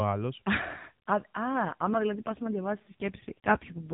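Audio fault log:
1.52 s to end, AMR rate drop. Speech turns rougher and more synthetic, with no gap or band change. This fits AMR-NB stepping down from 12.2 to 4.75 kbps.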